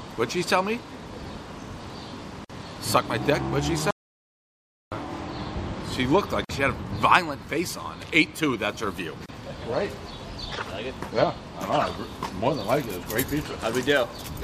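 At 2.45 s, a gap at a join of encoded pieces opens for about 49 ms. Separately encoded segments were joined untrimmed, leaving the encoder's start delay and end padding as smeared silence. From 3.91 to 4.92 s, an audio dropout to silence lasts about 1 s. The sound cuts to silence with no room tone left, likely from a lost input. Whatever played then is gone. Further join gaps follow at 6.45 s (46 ms) and 9.26 s (29 ms).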